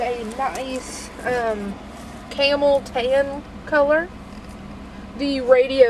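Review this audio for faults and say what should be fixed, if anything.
Nothing here needs fixing, as the signal holds continuity throughout with no dropouts, distortion, clicks or timing disturbances to correct.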